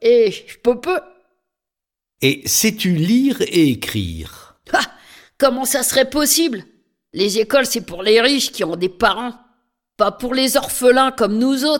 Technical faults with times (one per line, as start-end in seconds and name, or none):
none